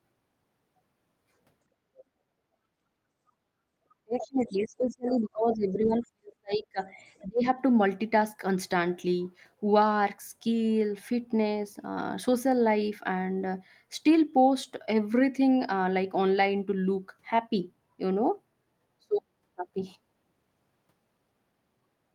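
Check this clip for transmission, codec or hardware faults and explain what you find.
Two echo-related faults appear in the speech, both pointing to an echo canceller on the talker's side.

Other side's voice leaking through: a faint second voice surfaces at 1.97–2.03 s and 7.18–7.26 s, about 25 to 30 dB under the speech, and more plainly at 4.19–4.63 s, about 15 dB down. The likely cause is loudspeaker playback reaching the microphone and surviving echo cancellation.

Speech suppressed in double talk: from 3.89 to 6.88 s the talker's level sinks, dropping by as much as about 35 dB, and again at 7.23–7.46 s by about 30 dB. Both dips coincide with the leaked voice, likely the canceller attenuating everything when both sides overlapped.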